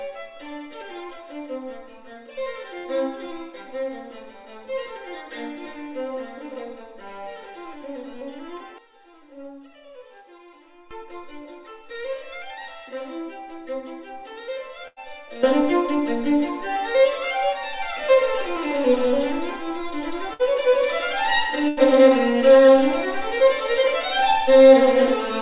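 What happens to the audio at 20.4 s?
A burst of packet loss hits at 20.33–20.42 s: about 58 ms of the last sound is stretched and faded to fill the gap, then playback resumes with roughly 60 ms skipped. This moment also sits within the sudden gain jump that began at 15.43 s, where level and background rose together by about 12 dB, likely from an unramped digital gain change.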